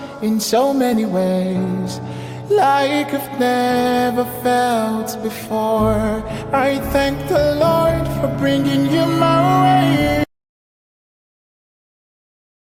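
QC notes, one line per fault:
10.24 s to end: audio dropout to silence. The sound cuts off abruptly and the rest of the clip is silence with no room tone, so the input was most likely lost, through a disconnected device, failed link or mute, while the recorder kept writing silence.
10.35 s: overlap between stream segments. About 12 ms is cut where two segments' time stamps overlap, at a boundary consistent with 2-second segments. It falls just inside the silent stretch, so the removed stretch and the jump at the splice go essentially unheard.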